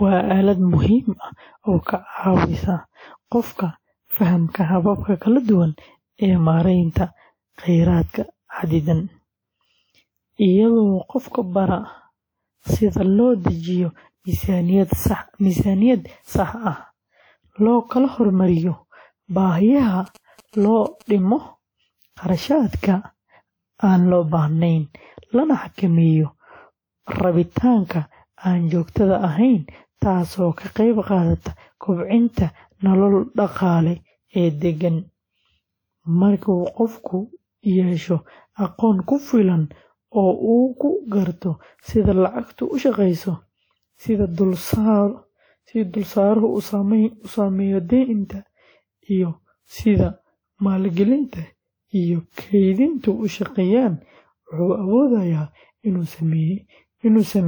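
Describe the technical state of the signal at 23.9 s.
At 23.9 s you're hearing generation loss, and it runs through the whole clip. The speech sounds swirly and hollow, with blurred attacks, which is likely from around seven passes through WMA at 96 kbit/s, each re-quantising on a shifted frame grid, with nothing above 20.1 kHz.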